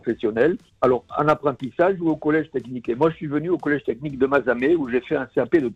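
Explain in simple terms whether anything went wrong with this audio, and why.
Nothing went wrong here: the signal stays steady and intact the whole way, with no break, distortion or sudden change anywhere in it.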